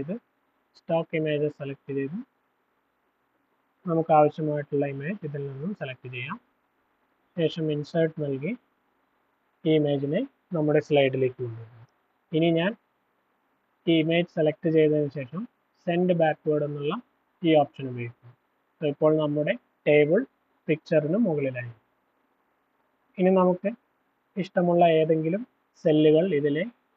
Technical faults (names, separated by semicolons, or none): none